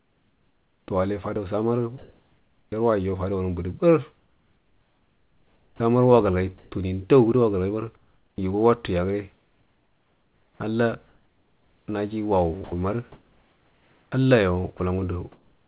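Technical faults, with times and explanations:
0.00–0.88 s, 1.98–2.72 s, 4.16–6.72 s and 7.96–8.38 s, comfort noise in place of the background: in each pause the room tone becomes a flat, featureless hiss, likely because the sender stopped transmitting when its voice detector heard no speech and the receiver filled the gap with synthetic noise. The real background sits roughly 42 to 45 dB below the loud speech. The fill is about 4 dB quieter than the real background before "tawal ai fadau", about 4 dB louder before "yarwaijo fadawan budu", and about 9 dB quieter at 7.96 s.
5.69–5.80 s and 8.36–8.38 s, onset clipped by the voice detector: speech starts abruptly at about 5.8 s and 8.38 s with no soft lead-in. The first 110 ms, and then 20 ms, are missing and filled with synthetic hiss, likely because the detector was slow to notice speech resuming and nothing was sent until it did.
9.34 s to the end, sound chopped by the voice detector: speech in this stretch turns choppy, with quiet syllables and word edges dropping out. 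About 3.5 s in total is replaced, likely by the detector switching transmission on and off repeatedly. The call path's narrowband sound, with nothing above 4 kHz, fits G.711 mu-law at 64 kbps.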